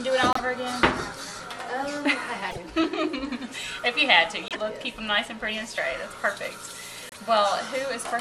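A likely broken MP3 bit reservoir: after dropped frames, the decoder reads borrowed data from the wrong frame, so the audio jumps ahead into a brief chirp, noise burst or short hole lasting roughly three 26.1 ms frames, at 0.33–0.40, 2.50–2.58, 4.48–4.57 and 7.09–7.18 s.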